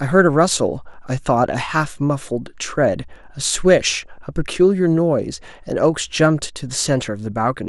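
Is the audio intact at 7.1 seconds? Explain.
No. MP2 compression, likely the cause, affects the speech throughout, including 7.1 s. The codec has too few bits, which fits a low bitrate near 80 kbps, so upper sub-bands switch off and flicker while the remaining bands are coarsely quantised, sounding dull, gurgling and granular.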